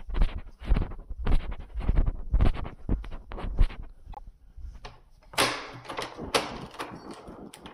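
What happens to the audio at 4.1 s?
Frames were likely cut from the MP3 stream, breaking the bit reservoir, so from 4.12 to 4.19 s the audio skips ahead through a garbled stretch under three 26.1 ms frames long.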